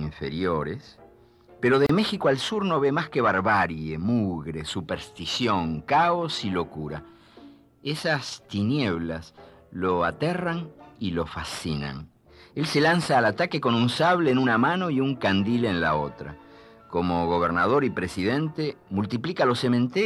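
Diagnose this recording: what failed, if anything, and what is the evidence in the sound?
A gap at a join of encoded pieces, at the codec stage: the sound drops out for about 31 ms, from 1.86 to 1.89 s, with smeared edges, then resumes where it stopped. Separately encoded segments were concatenated untrimmed, leaving encoder start delay and final-frame padding.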